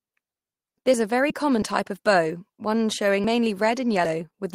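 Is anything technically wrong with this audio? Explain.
Yes. At 1.29 to 1.32 s there is a short concealed packet loss. Missing audio was patched by extending the preceding sound, giving a brief smear rather than a click. At 3.24 s, just after "type of bow one", and again at 4.05 s, the audio jumps ahead by around 40 ms with no fill or gap, likely a dropped buffer (overrun) that joined the surrounding audio directly.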